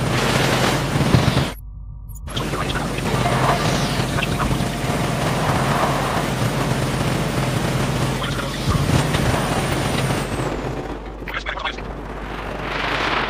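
From the first moment to the end, a steady mains hum sits under the audio, a low tone at 50 Hz that never changes in pitch or strength. Power-line current has leaked into the signal path, typically through a ground loop or the field of a nearby transformer. The hum runs only around 15 dB below the wanted sound, so it stays clearly audible throughout as a constant low drone beneath the material.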